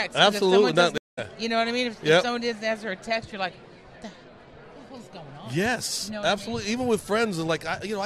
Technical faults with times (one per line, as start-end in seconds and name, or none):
0.98-1.19 stream reconnect